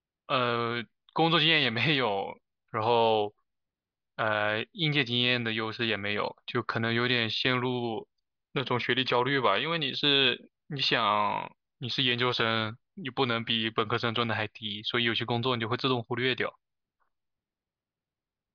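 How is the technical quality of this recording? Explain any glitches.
No technical glitches can be heard anywhere in this speech recording. There is nothing in it that calls for an explanation.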